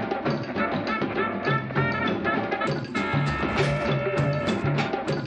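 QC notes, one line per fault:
No faults found in the music. Nothing here needs attention.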